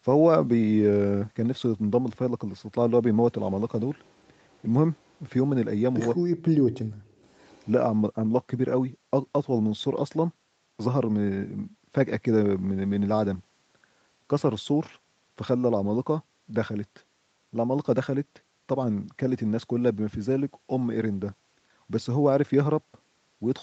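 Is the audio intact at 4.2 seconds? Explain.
No, there's an echo leak running from about 4.04 to 4.28 s. A faint, delayed copy of the speech trails the original by about 155 ms, sitting very low, far beneath the direct voice. The likely cause is a far end on a loudspeaker whose echo canceller didn't fully scrub what its microphone picked up, so that residue got sent back down the call. It comes across as a quiet ghost of the speech just behind it.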